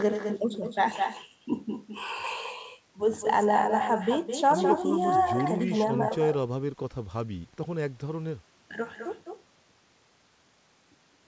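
Throughout the speech, each phrase is followed around a fifth of a second later by a distinct copy about 6 dB quieter. This is echo with no canceller: the far end's loudspeaker feeds its microphone, and nothing removes that return. Unlike room reverberation, it is a separate, delayed repeat rather than a smeared tail, and it shares the call path's ceiling of 8 kHz.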